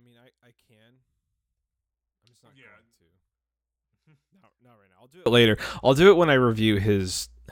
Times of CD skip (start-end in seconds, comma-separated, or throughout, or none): none